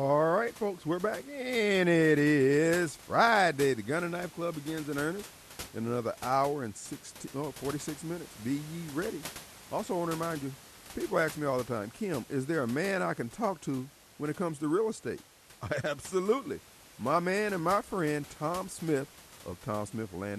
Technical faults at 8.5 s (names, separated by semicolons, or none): none